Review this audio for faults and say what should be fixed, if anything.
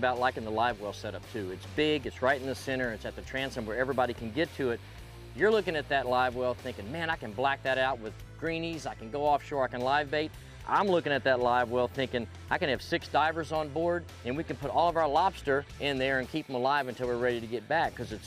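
Nothing needs fixing, since the signal shows no technical faults at any point.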